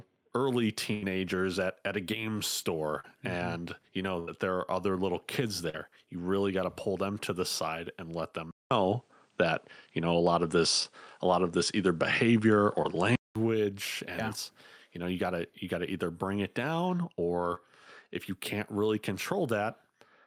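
A speech recording with three kinds of network and capture fault. At 0.93 to 1.04 s, just before "at at a game", and again at 4.19 to 4.29 s, the last sound is held and fades, then jumps ahead. These are bursts of packet loss: about 80 ms never arrived, and the receiver extended the last sound to cover the gap. Shorter smears occur at 3.00 to 3.05 s, 5.69 to 5.75 s (between "are other little kids" and "you really got to"), 10.83 to 10.86 s, 12.82 to 12.86 s, and 17.54 to 17.58 s. Each is short concealed packet loss, with 12 to 39 ms rebuilt from the preceding sound. After "the side and let", a 200 ms silence at 8.51 s leads into duller audio with nothing above 9.9 kHz, a shifted level and a faint new noise floor until 13.36 s, likely from the input being switched to a poorer device.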